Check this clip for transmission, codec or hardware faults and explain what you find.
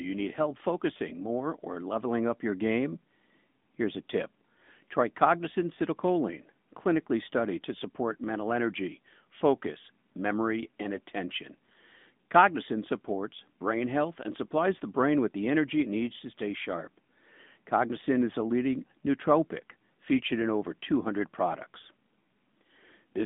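The whole clip carries one fault, the AMR narrowband mobile codec. Throughout, the speech sounds thin, buzzy and synthetic, confined to roughly 200 Hz to 3.6 kHz with nothing above 3.7 kHz. The codec rebuilds the voice from a coarse vocal-tract model at a mid-range bitrate, which fits roughly 10 kbps, so its damage is plainly audible.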